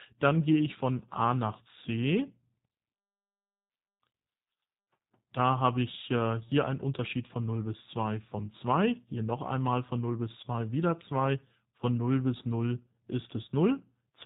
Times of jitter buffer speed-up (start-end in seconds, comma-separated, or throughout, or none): none